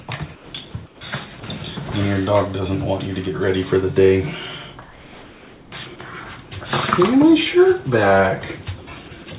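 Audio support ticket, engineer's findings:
Comfort noise in place of the background at 0.35–0.53 s, 0.86–1.01 s and 4.82–5.72 s. Real room tone swapped for a flat, featureless hiss, about 6, 8 and 3 dB quieter respectively. Background sits about 25 dB below loud passages. Likely the sender's voice detector gating pauses (discontinuous transmission), with the receiver synthesising shaped noise until sound resumes. Longest patch, 900 ms near 5 s. Band-limited to 4 kHz throughout, consistent with a G.711-type call codec.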